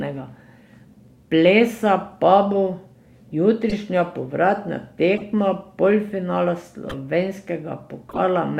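At 3.70, 5.16, 6.85 and 8.09 s, corrupt frame decoded: damaged bits were decoded anyway, spraying misplaced energy across a few frames. These are chirpy bursts, visible as brief vertical smears on a spectrogram, the last peaking near about -5 dBFS.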